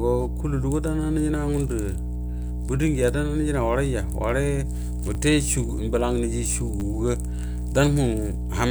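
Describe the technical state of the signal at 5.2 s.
A repeated buffer at 5.15 s: a roughly 10 ms piece of the speech plays twice when fresh audio arrives late, giving a brief click or buzz at the hard join.

Mains hum is present there and throughout: a steady 60 Hz tone from power-line coupling, loud, sitting only a little below the speech level.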